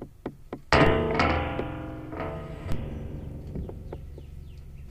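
A recording of everyday sounds with two DC steps, at 0.87 s and 2.72 s. Each time the waveform's zero line jumps by about -17 dBFS and relaxes back through a 5 Hz high-pass, giving a low thump and a brief broadband smear at the bottom of the spectrogram.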